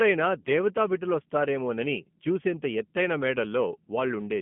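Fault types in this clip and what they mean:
G.729 codec, throughout: the speech is rebuilt from a modelled vocal tract, a pitch predictor and sparse pulses in each short frame. This leaves it plainly rough and synthetic, confined to 150 Hz to 3.4 kHz, which fits an 8 kbit/s VoIP link.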